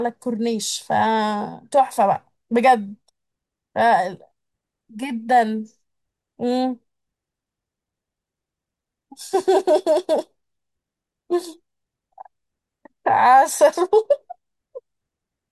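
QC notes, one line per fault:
Nothing to flag on this speech clip, so no QC lines are needed.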